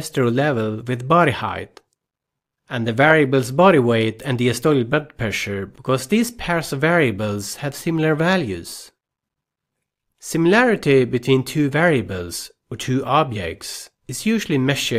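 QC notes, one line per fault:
Nothing stood out on listening.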